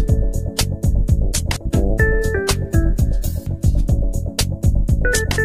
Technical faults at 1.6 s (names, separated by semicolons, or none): audio missing between chunks